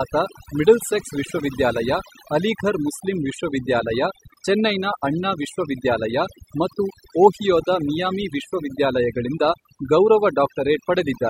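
Throughout the speech, pauses fall to near silence flecked with twinkling specks: overdone noise removal, with bands near the noise estimate cut away.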